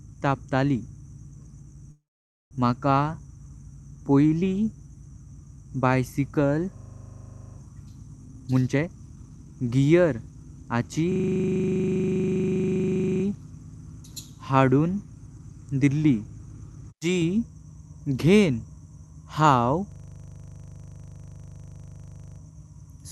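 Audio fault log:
1.91–2.53 s, call audio freeze: the sound trails off briefly, then about half a second of silence, and resumes where it stopped. Likely packets arrived late and the jitter buffer ran dry.
6.77–7.57 s, 11.12–13.24 s, 19.92–22.40 s, system hang loop: a stalled system replays one 40 ms buffer, so the sound becomes a steady buzz at 25 Hz.
8.25–9.68 s, jitter buffer speed-up: the receiver trims pitch-period slices to reduce backlog, cutting about 0.7 s, so the speech runs at 142% speed at unchanged pitch and sounds hurried.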